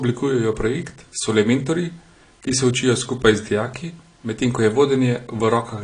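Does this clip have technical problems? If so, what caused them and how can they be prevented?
Yes: AAC compression throughout, with nothing above 10.1 kHz and dull, smeared, warbly speech, likely from a low-bitrate AAC-LC encode, around 32 kbps. Prevent it by encoding at a higher bitrate.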